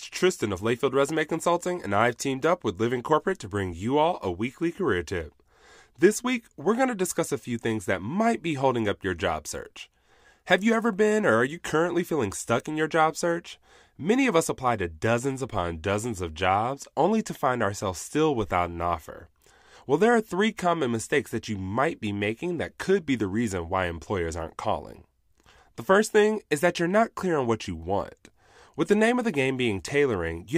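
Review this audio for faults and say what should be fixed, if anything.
Nothing here needs fixing; I didn't hear anything go wrong at any point in the recording.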